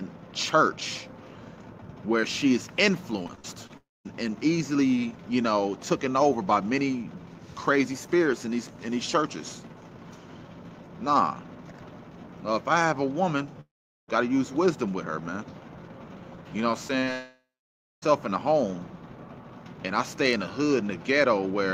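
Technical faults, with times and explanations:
3.23–3.71 s, repeated packet loss (robotic sound): five short gaps, the longest 44 ms, are each patched by extending the last sound, leaving choppy audio with pieces missing.
3.77–4.07 s, 13.61–14.10 s and 17.13–18.04 s, long network dropout: the sound turns to a fading continuation, then silence for about 0.21, 0.42 and 0.6 s, likely because packets stopped arriving, and resumes with that audio lost.
16.88–16.96 s, 17.00–17.04 s and 17.04–17.09 s, short concealed packet loss: about 20 ms goes missing each time and is filled by continuing the previous sound, heard as brief smears or wobbles.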